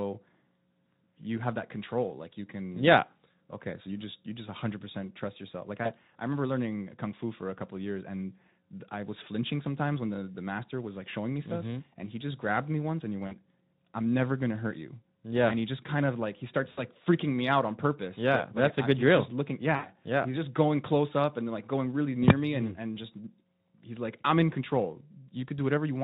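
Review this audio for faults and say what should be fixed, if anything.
VoIP packet loss concealed by the speech codec: packets dropped at 13.27, 16.71 and 19.75 s, losing about 40, 60 and 80 ms. The Speex decoder extrapolated its last pitch and filter, smearing each gap into a fading buzz with weak audio just after. A deeper jitter buffer with forward error correction would prevent it.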